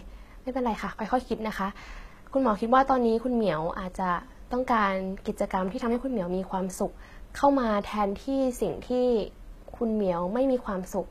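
From start to finish the sibilants sound gritty and lispy, the upper treble has a metallic sheen, and nothing is present above about 14.9 kHz. The likely cause is HE-AAC compression, rebuilding the speech's treble from copied lower bands, which fits a bitrate around 20 kbps.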